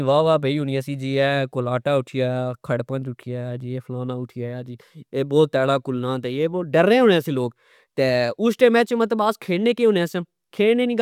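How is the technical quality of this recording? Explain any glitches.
No glitches can be heard anywhere in the recording.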